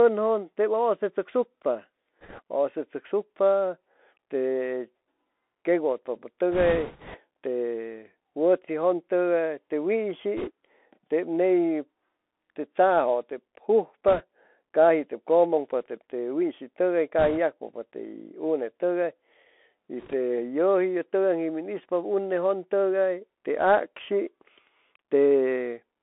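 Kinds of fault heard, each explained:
Bluetooth CVSD headset codec: the speech runs through the narrowband headset codec the whole way, one bit per sample at 64 kHz with an adapting step, so it's squeezed into roughly 250 Hz to 3.6 kHz. S sounds go scratchy, loud bright bits distort, and a grainy hiss sits underneath.
Bits errors on a Bluetooth voice link: flipped bits on the headset link show up as short bursts of rushing, crackly noise rather than loud clicks, since each bit carries little weight. The longest one runs from 6.52 to 7.19 s, with shorter hits around 2.2, 10.4, 14.1, 17.2 and 20.0 s.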